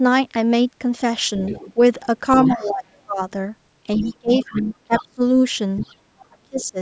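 A speech recording from a call where both ends talked at once. The echo canceller likely could not separate the local talker from the loudspeaker echo, so it turned both down. The result is speech suppressed in double talk. Between 1.38 and 5.2 s the talker dips by up to around 20 dB, for about a second and a half in total. From 6.21 to 6.78 s it drops harder, near 30 dB, for about half a second. The same canceller likely left part of the loudspeaker signal in the microphone. The other side's voice leaks through at about 15 dB below the talker, from 1.42 to 2.64 s and again from 3.94 to 6.64 s.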